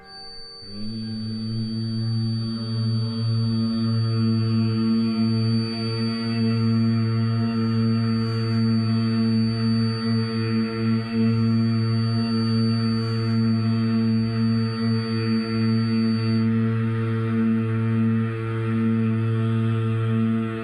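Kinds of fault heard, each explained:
Feedback whistle: There's a thin, steady whistle at about 4.6 kHz sitting behind the sound from the very start until around 16.5 s, swelling and fading slowly in level and staying roughly 20 dB under the main signal. It never swells into a howl, which points to a speaker-to-mic loop likely hovering right at the edge of feedback, so that one high frequency keeps ringing without building up.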